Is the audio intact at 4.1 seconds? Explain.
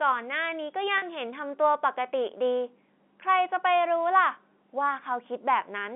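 Yes, the audio is intact at 4.1 seconds, with no fault present at that moment.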